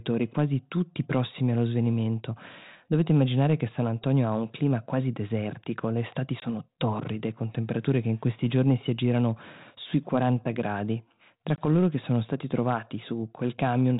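Packet loss on an ADPCM call cuts the speech at 6.40–6.43 s, between "quasi desertico le estati" and "torride con temperature che", and at 11.56–11.68 s, before "che sono stati trovati". Each is a hard-edged silent gap, showing as a flat waveform and a blank vertical band on a spectrogram, with the speech returning slightly distorted after it as the decoder's predictor and step size resynchronise.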